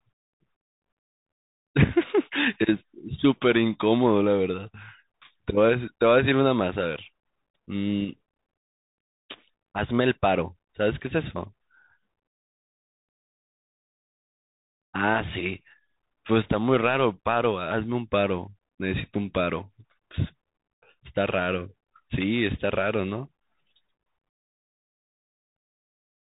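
Throughout, the speech carries Bluetooth CVSD headset codec damage. It codes one-bit up-down steps and cuts everything above 3.8 kHz. S sounds turn scratchy over a granular hiss.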